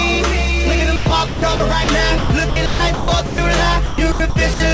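The audio turns choppy three times, from 0.96 to 1.88 s, 2.18 to 3.38 s and 3.86 to 4.60 s, with stretches of about 320, 580 and 320 ms swapped for synthetic hiss. This is likely sound chopped by the voice detector filling gaps with comfort noise.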